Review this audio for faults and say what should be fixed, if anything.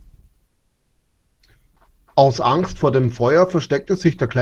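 The receiver most likely ran its jitter buffer dry when packets stalled in transit, producing a call audio freeze from 0.47 to 1.41 s. For about 0.92 s the last bit of speech is stretched into a fading buzz-like fill rather than silence. When delivery resumes, the speech picks up exactly where it broke off, so nothing is lost, but a 920 ms hole has been inserted into the flow. Giving the buffer more headroom and fixing the network path that stalled would prevent this.

Right after the stall, a stretch of audio was dropped, either in transit or by the buffer, causing a skip ahead at 1.75 s. Roughly half a second of speech is dropped, and the two sides are stitched together with only about 10 ms of filler, so the listener hears an abrupt jump forward with a chunk of the sentence simply gone. Letting the buffer drain gradually through time compression rather than dropping a block would prevent this.

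Having just lost its reserve, the jitter buffer rebuilt it by repeating short pitch periods and slices of pauses, a jitter buffer slow-down running from 1.93 to 4.40 s. This adds about 115 ms in total, so the speech plays at about 96% of normal speed with unchanged pitch. Sounds are slightly drawn out, and a faint warble can creep in. Spreading the refill more gently or starting with a deeper target delay would avoid the audible stretch.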